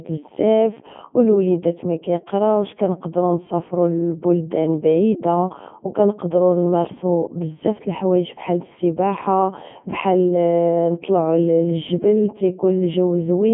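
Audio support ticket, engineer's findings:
Codec 2 vocoder, whole clip. Robotic, buzzy speech. Probable component: low-rate digital-radio vocoder, consistent with its 3.2 kbit/s top mode. Only pitch, voicing, energy and envelope are transmitted; the decoder rebuilds the voice from sine waves. Spectrogram: band limited to roughly 150 Hz to 3.4 kHz, empty above 3.6 kHz, with unnaturally regular harmonic combs and no fine noise texture. Waveform: synthetic, periodic shapes with heavy damage throughout.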